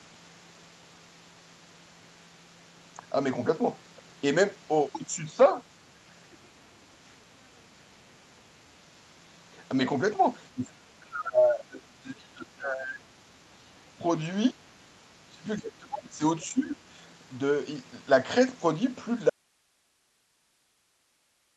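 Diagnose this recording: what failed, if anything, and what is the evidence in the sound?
The speech sinks and thins in repeated stretches: from 10.54 to 14.04 s it falls by up to about 25 dB, briefly at 14.51–14.64 s by about 20 dB, from 15.01 to 16.23 s by about 30 dB, and at 16.52–16.79 s by about 10 dB. This is speech suppressed in double talk at the call-processing stage. The echo canceller likely lost track of which signal was local talk and which was loudspeaker echo, and turned the talker down along with the echo.

Two short scraps of the other side's voice leak through, at 16.41–16.45 s and 16.66–16.70 s, sitting about 30 dB and about 25 dB below the speech. Both are too brief to read as anything but fragments. The stage is again call processing. The far-end signal played on the local loudspeaker was likely not fully cancelled from the microphone, leaving these remnants in the outgoing audio.

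At 19.30 s the speech cuts off abruptly and never returns. From there to the end only hiss remains, about 45 dB below the speech level. It is a clean break, not a fade or a pause. This is an audio dropout to a faint residue: the wanted signal was likely lost, while everything after the break stayed live and carried only its own noise floor.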